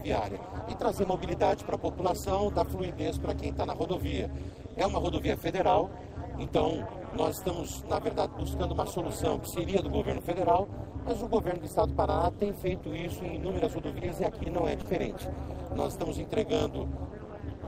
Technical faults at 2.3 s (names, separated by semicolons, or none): overlap-add ripple